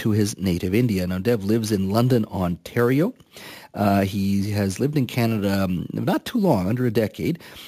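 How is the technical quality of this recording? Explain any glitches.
The recording has one fault, present from start to finish: imaging from sample-and-hold upsampling. Audio at 16 kHz was raised to 44.1 kHz by repeating samples without a smoothing filter. This leaves a mirrored copy of the speech spectrum between 8 kHz and 16 kHz, about 24 dB below the signal. It sounds like a metallic fizz that rises and falls with the speech. On a spectrogram, the band above 8 kHz mirrors the energy below it. Zoomed in, the waveform shows small staircase steps.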